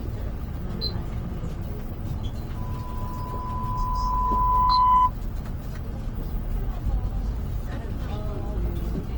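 Throughout, the everyday sounds come out grainy and rough, with noise-filled bands visible as a speckled spectrogram reaching to about 20.4 kHz, likely Opus compression at a low bitrate near 16 kbps. From 2.56 s to 5.11 s, a loudspeaker feedback squeal appears: a steady 1 kHz tone swells over roughly two seconds to about 10 dB above the sound, drawn as one bright horizontal line.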